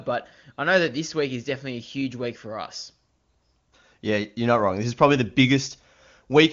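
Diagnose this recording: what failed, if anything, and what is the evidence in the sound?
Nothing failed here: the speech sounds like an ordinary AMR wideband (HD Voice) call, with the top end stopping at about 7.2 kHz as that codec's design intends, and the detail fits its highest mode, around 23.85 kbit/s.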